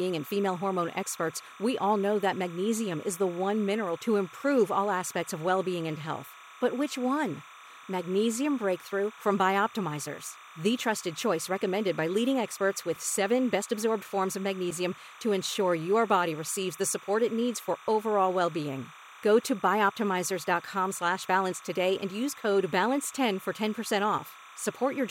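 Timecode bleed runs under the speech for the whole clip: a steady chirping warble, well below the voice, switching between tones near 1 and 2 kHz. Linear timecode at a 29.97 frames per second rate has leaked in from an adjacent track or cable.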